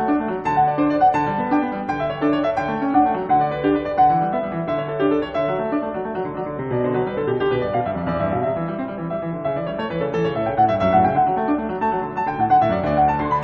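No technical faults can be heard anywhere in this music. There is nothing here that calls for a timestamp or a closer look.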